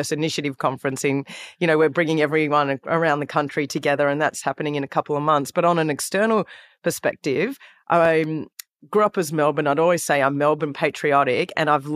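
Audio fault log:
No technical faults are audible in the speech recording; the signal remains intact and continuous at every point.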